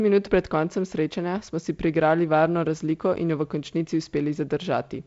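No technical faults can be heard in this speech. The audio comes through G.722 wideband telephone coding at 48 kbit/s, with nothing above about 7.7 kHz and only the light hiss and slight graininess that this coding leaves at that rate.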